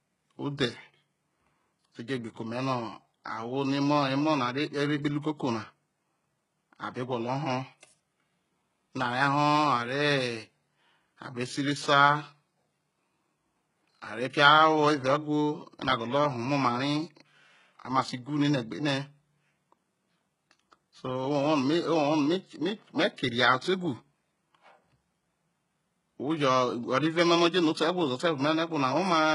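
HE-AAC compression runs through the whole speech clip: the treble sounds synthetic and heavily damaged, and nothing reaches above 11.1 kHz. The likely cause is spectral band replication at a very low bitrate, around 12 kbps, copying lower bands upward so s sounds turn gritty and lispy.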